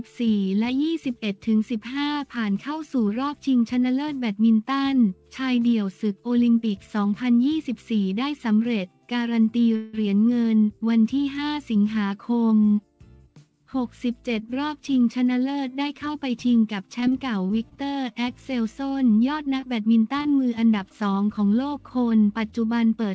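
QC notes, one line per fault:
9.76–9.95 s, call audio freeze: The sound stalls for about 0.17 s and the last moment is stretched into a fading buzz. The likely cause is packets held up in transit, draining the jitter buffer. When they arrive, the audio resumes where it stopped, so nothing is lost, only delayed.
17.00–17.79 s, repeated packet loss (robotic sound): Five short holes, the longest about 21 ms, break this stretch. Each is patched by continuing the previous sound before the next hole arrives. About 80 ms goes missing, leaving a choppy texture with pieces missing.
19.61–19.64 s, 20.22–20.27 s, 20.89–20.92 s, short concealed packet loss: Each time, about 20 ms of audio failed to reach the decoder. The receiver bridged the hole by extending the prior sound and blending back in. Each one is heard as a brief smear or wobble.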